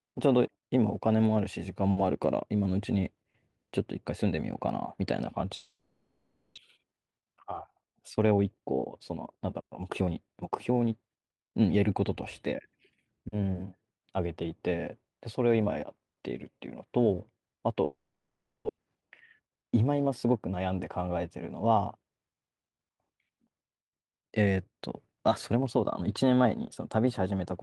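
At 5.55 s the sound breaks off and the last fragment is drawn out into a buzz that fades, with a brief hush before the audio returns at 6.59 s. About 0.6 s of material never comes back. That missing content separates a long network dropout from a short packet loss concealed in place. The likely cause is a stall in packet arrival.

From 6.77 to 8.72 s and again from 9.12 to 10.70 s, the speech runs about 10% and then 12% fast at an unchanged pitch. This is a jitter buffer speed-up. The receiver snips out tiny pitch-period slices, roughly a fifth of a second in each stretch, to shed the delay built up during the dropout. Because the pitch holds steady, this differs from a resampling speed change, which would raise the voice.

The pattern repeats later. A dropout from 17.85 to 18.71 s loses about 0.6 s, and this time the fading fill gives way to about half a second of silence. A 10% speed-up then follows from 18.78 to 20.57 s.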